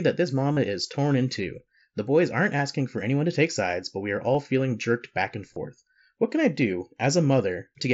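At 0.52 to 0.57 s, between "that this" and "is torn in two", a 45 ms stretch turns into a flat, buzzy repeated tone at full level with a slight warble as normal audio resumes. That is concealed Bluetooth headset packet loss: a run of missing headset packets, consistent with about six, filled by looping recent waveform. The brief 7.5 ms loss at 4.34 s, after "sides but we are", is nearly hidden. At 5.54 to 5.56 s, after "feeling jerked back and", 22.5 ms buzzes briefly. Unlike plain dropouts, there is no silence or click.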